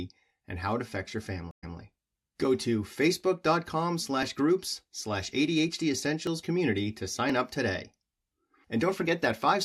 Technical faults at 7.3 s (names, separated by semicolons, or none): periodic USB or driver dropouts